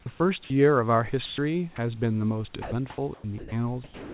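At 0.02 to 0.06 s the speech briefly gives way to steady hiss. This is sound dropped by the voice detector, likely because the sender judged the sound to be background. It stopped sending, and the receiver filled the gap with comfort noise. The same happens at 0.44 to 0.5 s and at 1.26 to 1.38 s. The second gap is longer, about 120 ms. A very short dropout follows at 1.76 to 1.78 s.

From 2.62 to 3.52 s the sound is chopped by the voice detector. The detector likely switched on and off several times. About 420 ms of this stretch is comfort noise.

At 3.84 s the speech is dropped again and the hiss runs to the end. About 200 ms of tail is lost, likely to the detector treating the ending as background.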